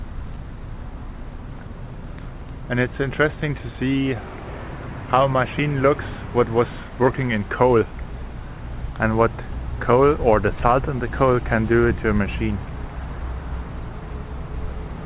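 No technical faults are audible.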